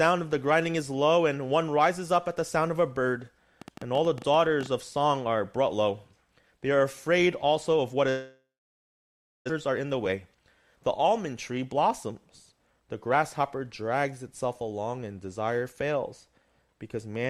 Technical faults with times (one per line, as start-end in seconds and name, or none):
3.62-4.67 train of clicks
8.09-9.52 long network dropout
9.53-12.12 jitter buffer speed-up
12.52-13.41 jitter buffer speed-up